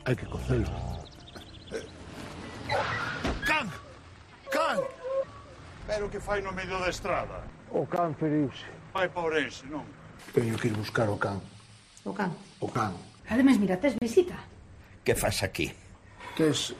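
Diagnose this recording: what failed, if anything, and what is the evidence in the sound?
The fault sits at the playback stage: gaps between stream segments. Hard-edged silent holes appear at 7.96 s (about 15 ms), 8.98 s (about 4 ms) and from 13.98 to 14.02 s (about 34 ms), all on whole-second marks that fit 1-second segments. The segment time stamps don't quite meet, so the player pads the gap with silence. Unlike a dropout, nothing is lost: sound resumes where it stopped, and the gap only adds time.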